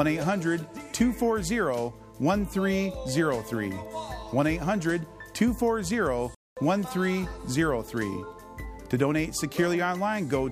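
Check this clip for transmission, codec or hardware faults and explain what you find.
One fault stands out: a playback stall from 6.35 to 6.57 s. The sound cuts off mid-flow and the output stays silent for about 221 ms before resuming. The likely cause is the player running out of data or its thread being blocked. On a waveform it is a flat gap, and on a spectrogram an empty vertical band across all frequencies.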